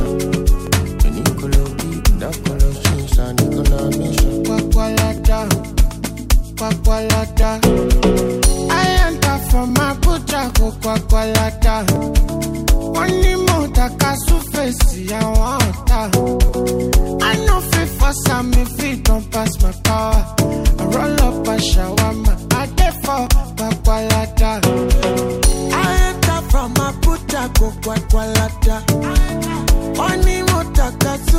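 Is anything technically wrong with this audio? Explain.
Yes, there's a steady tick running through it. From about 0.67 s to 30.04 s you get a click or pop every 2.26 s, roughly fifteen in all. That regularity points to clock drift buffer slips. Most likely two devices are running on separate clocks that disagree by something like 500 ppm, so the buffer between them creeps until it drops or repeats a chunk of around 70 samples, and each of those jumps is a click.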